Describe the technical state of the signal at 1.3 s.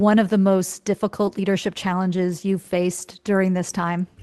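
Short concealed packet loss sits at 1.25 to 1.29 s, between "of the most" and "leadership challenges you have". About 20 ms of the call arrived too late for the decoder, and the receiver covered the gap by extending the preceding sound for roughly 15 ms before blending back into the real signal. It comes through as a brief smear or wobble in the speech, heard through the Opus path's 12 kHz upper limit.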